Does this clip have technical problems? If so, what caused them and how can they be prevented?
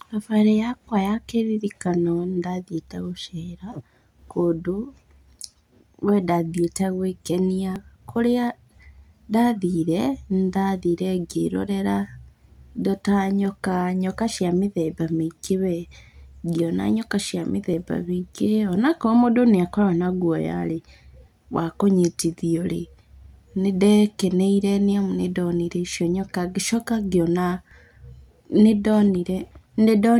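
Yes. The speech jumps forward abruptly three times, at 7.76, 17.74 and 27.71 s, each time losing roughly 20 ms of sound with the two sides butted together and no gap of silence. The skips recur almost exactly every 10 s, which points to audio missing between chunks: the recorder or processor likely handles the stream in 10-second blocks and drops a sliver each time it finishes one block and starts the next. Overlapping or double-buffering the chunk handover, so capture never pauses between blocks, prevents it.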